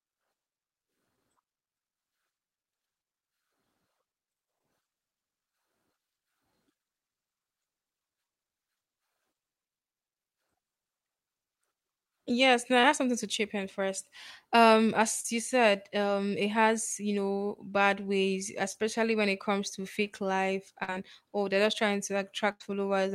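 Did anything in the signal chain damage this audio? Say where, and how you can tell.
Yes, the damage comes from the network stage of a call. Short concealed packet loss is audible at 1.16 s and 4.59 s, and across 12.81–12.84 s, 15.20–15.25 s and 18.72–18.75 s. Each is a brief smear or wobble, lasting 10 to 40 ms. The last three sit just before "I have something to", just before "you said um it", and between "you know bad ways" and "when it comes to". Packets arrived too late. The decoder extended the preceding sound to cover each hole, then blended back.

Two longer gaps are a burst of packet loss. They run from 20.83 to 20.89 s and from 22.51 to 22.61 s, about 50 ms and 90 ms. Here several consecutive packets failed to arrive in time. The receiver kept extending the last sound and turned it down as the gap went on. You hear a held buzz or a fading hiss, then the speech jumps ahead with that stretch missing.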